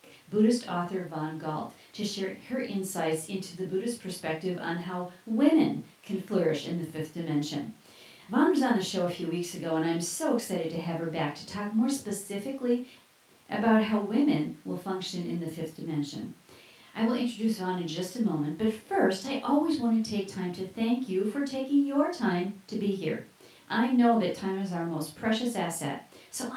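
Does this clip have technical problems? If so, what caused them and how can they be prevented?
No, there are no technical faults anywhere in this speech recording. With nothing going wrong, there is no cause to trace and nothing that needs preventing.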